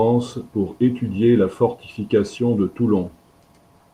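No faults detected; the speech shows only the light coding texture expected from Opus voice compression in its hybrid fullband mode.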